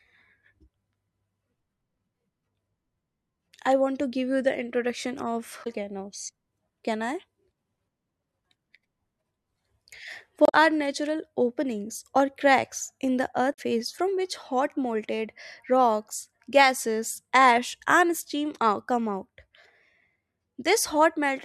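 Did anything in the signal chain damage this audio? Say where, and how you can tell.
Yes, damaged data in a compressed stream at the codec or storage stage: brief garbled blips at 5.61–5.67 s after "you the introduction of", 10.45–10.54 s before "natural openings or cracks", and 13.50–13.59 s before "from which hot molten". Corrupted frames desynchronise the decoder, which shows as short vertical smears on a spectrogram.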